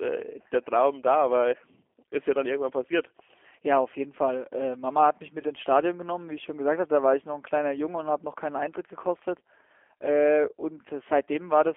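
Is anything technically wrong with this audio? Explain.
Yes. Throughout the speech the G.729 codec is plainly audible. The sound is confined to a telephone band of roughly 300 Hz to 3.4 kHz, which fits an 8 kbit/s G.729A stream. The codec rebuilds each 10 ms frame from a vocal tract filter, a pitch predictor and a few pulses, not from the waveform itself. That model leaves the voice rough and slightly synthetic, with nothing in the upper range to give it air or crispness.

VoIP packet loss concealed by the speech codec occurs twice, at 0.42 to 0.46 s and at 5.41 to 5.45 s. Each gap is about 20 ms, which points to a single lost packet. The decoder fills the hole by carrying its last pitch and filter settings forward at falling gain. The result is a brief buzzy tone or coloured noise that fades, in place of the missing audio. Because each frame is predicted from the previous one, the voice stays weakened or distorted for a short time after the gap.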